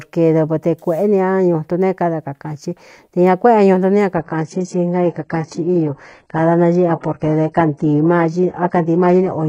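Adaptive stream at a lower bitrate, from 4.17 s to the end of this speech clip: the sound switches abruptly, with no gap, from a higher-quality rendition to a heavily compressed one. From that point nothing is present above 10.6 kHz, and the treble turns thin with stronger codec artefacts. This fits a drop from roughly 96 kbit/s AAC to a low-rate HE-AAC stream, chosen when the connection slowed.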